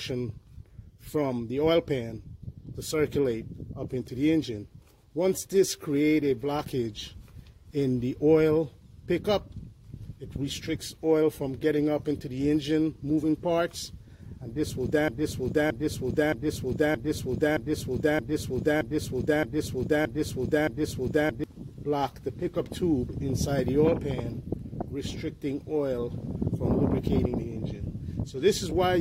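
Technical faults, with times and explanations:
15.08 to 21.44 s, broken-record loop: a 0.62 s fragment repeats identically ten times, likely from a stalled stream. Unlike echo, nothing fades, and the skipped audio is lost.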